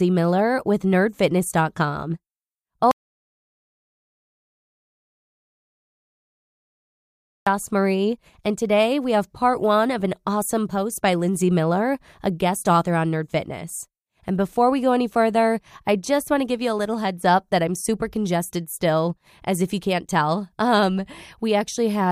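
At 2.91 s an audio dropout to silence cuts the speech mid-flow until 7.47 s, likely a lost input. Unlike a natural pause, these 4.55 s hold no room tone at all.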